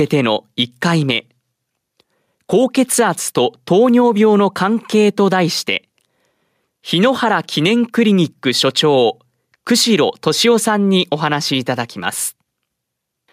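A speech recording with no technical fault to report. Nothing wrong can be heard anywhere in it, so there are no times or causes to give.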